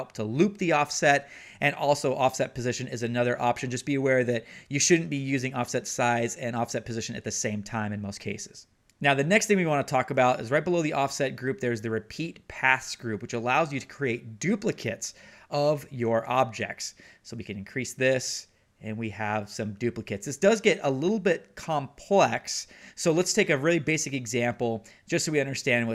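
Nothing technical goes wrong anywhere in this one, so there's no fault to point to at any moment.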